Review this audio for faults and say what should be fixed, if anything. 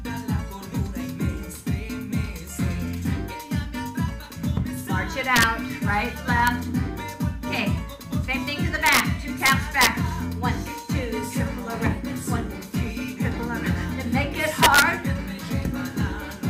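Violent, sharp cracks on loud peaks at 5.36–5.43 s, 6.47 s, 8.86–9.00 s, 9.46–9.87 s and 14.63–14.82 s are integer overflow: peaks pushed up to about 2 dB past the limit wrap to the opposite sign. Saturating arithmetic or a limiter ahead of the integer conversion would prevent this.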